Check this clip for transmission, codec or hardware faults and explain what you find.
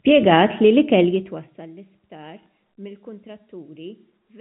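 Two faults turn up in this speech clip.

From 0.99 to 1.74 s there is zipper noise: a gain drop of roughly 20 dB is applied in unsmoothed steps, around fifty a second. Each jump leaves a small click, so a fast ticking buzz rides on the speech as it fades.

From 2.43 to 2.46 s there is packet loss with the last packet repeated: about 30 ms of audio, which points to a single lost packet, is filled by replaying earlier audio. The replay gives a small blip over the narrow telephone-band sound.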